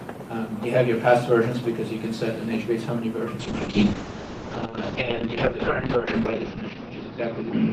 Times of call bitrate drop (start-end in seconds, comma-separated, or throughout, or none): 3.41-7.73